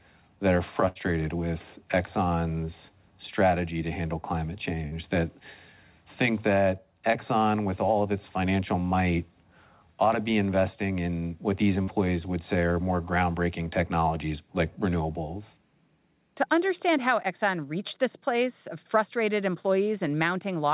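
At 0.88 s, just after "that are", a burst of packet loss cuts out about a tenth of a second, running to 0.98 s. The receiver extends the last sound for about 72 ms, fading it as it goes, so a held, decaying buzz or hiss replaces the real audio. About 80 ms of the original never returns, and the sound resumes further along. On a spectrogram, the harmonics or noise band freeze into flat horizontal streaks that dim toward the gap's end. The waveform shows a repeating, shrinking pattern before an abrupt restart.

Two short concealed packet losses follow, one at 4.87 to 4.94 s after "strategy to handle climate" and one at 11.83 to 11.90 s between "investing in what these" and "would say are more". Each drops about 40 ms, which the decoder fills by continuing the preceding pitch or noise and then blending back. The result is a brief smear or wobble, with a tiny stretch of sound swallowed. A spectrogram shows a thin patch of smoothed, repeated texture where fine detail should be. 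In the waveform, a few copied cycles stand out against the surrounding irregularity. Throughout, nothing appears above 4 kHz, which fits a narrowband call codec such as G.711.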